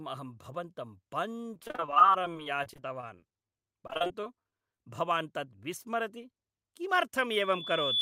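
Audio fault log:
1.54–4.80 s, repeated packet loss (robotic sound). The speech breaks up again and again across this stretch. Packets kept going missing, 47 gaps in all, none longer than 38 ms. Each hole was filled by stretching the sound just before it. About a fifth of the span is patched this way. The repeated filler gives a choppy, robotic quality. Small pieces of speech are simply gone.
6.72–7.27 s, jitter buffer speed-up. Here the speech suddenly runs quicker, at about 109% of normal speed. The pitch stays the same. The receiver had built up more buffered audio than it wanted. To shrink that delay it cut out short pitch-period pieces, many times in a row, roughly 50 ms in total. The result sounds hurried rather than higher.
7.38–8.02 s, loudspeaker feedback squeal. A single tone at 3.4 kHz rises out of the sound and keeps growing to the end. It builds over roughly 0.7 s and ends up about 10 dB above the speech. 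A microphone is picking up its own loudspeaker. At this frequency the loop gain exceeds one, so the tone feeds itself into a squeal.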